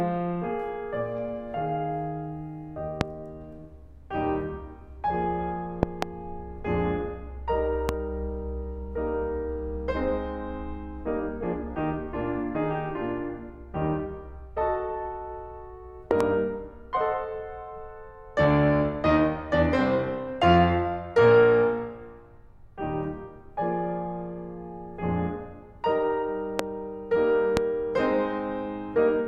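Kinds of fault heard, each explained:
Loud pop: a sharp thump jumps out well above the music, roughly 20 to 25 dB louder, at 3.01 to 3.03 s, 7.89 to 7.91 s, 26.59 to 26.62 s and 27.57 to 27.59 s, with double pops at 5.83 to 6.05 s and 16.11 to 16.23 s. The likely cause is a sudden voltage pulse in the signal chain. Unlike a dropout click, the music continues underneath with no gap.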